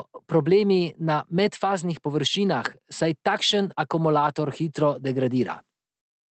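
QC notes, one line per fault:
No faults to note in this speech clip.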